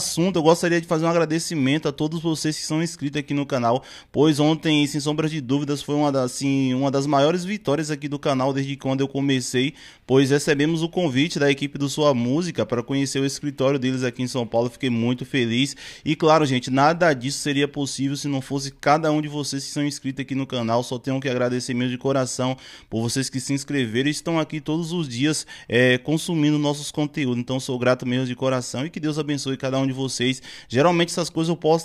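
No technical faults can be heard in this audio.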